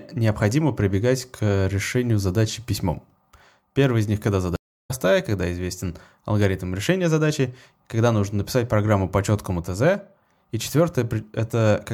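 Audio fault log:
4.56–4.91 s, stream reconnect: after "из них когда" the speech stops dead for about 0.33 s, then resumes at "когда известен алгоритм решения", picking up roughly a third of a second further along, with the first instant coming back softened. The link broke, the player reconnected and started a new decoder mid-stream. Unlike a plain dropout, the audio doesn't continue from where it paused but jumps ahead, so some speech is simply missing.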